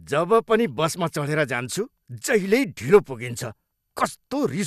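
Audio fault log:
No faults are present, and the speech signal stays continuous and stable across the whole recording.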